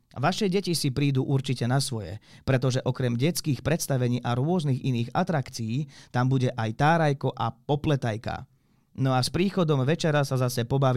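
From 9.41 to 10.18 s, after "a s", hard clipping occurs. The signal exceeds the limit by about 2 dB. Flattened peaks crackle.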